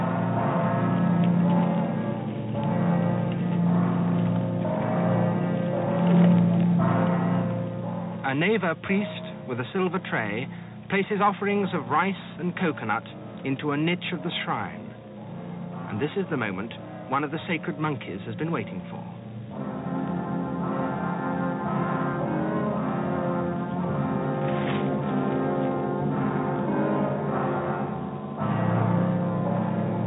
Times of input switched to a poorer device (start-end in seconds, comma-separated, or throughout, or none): none